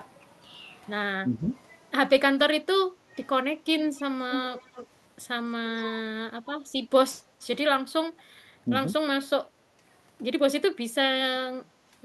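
At 3.12 to 3.17 s the speech is briefly suppressed in double talk, dipping about 5 dB, likely because an echo canceller turned down both talkers. A small notch shows in the waveform envelope.

Echo leak follows at 3.78 to 4.03 s and 4.31 to 4.87 s. A copy delayed by 265 ms sits about 20 dB, then about 5 dB, below the speech, likely loudspeaker echo the canceller missed. On a spectrogram it appears as shifted repeats of the harmonics.

Deeper double-talk suppression returns at 5.83 to 6.14 s and 7.88 to 7.92 s, cutting about 15 dB, with dips in the waveform envelope.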